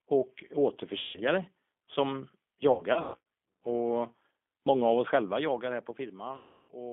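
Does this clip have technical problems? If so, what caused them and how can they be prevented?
Yes. The whole clip went through the G.729 codec at 8 kbit/s, which rebuilds speech from a vocal tract model and a few pulses per frame and passes only about 250 Hz to 3.5 kHz. The speech sounds narrowband, slightly rough and synthetic. Using a wideband codec such as G.722 or Opus would prevent this.

VoIP packet loss concealed by the speech codec occurs three times. About 150 ms was lost at 0.99 to 1.2 s, 300 ms was scattered across 2.72 to 3.19 s, and 330 ms was lost at 6.36 to 6.72 s. Each time the decoder stretched its last pitch and filter into a fading tone or noise, and the sound stays weak briefly after packets resume. A more stable network path with QoS priority for voice traffic, or forward error correction, would prevent these losses.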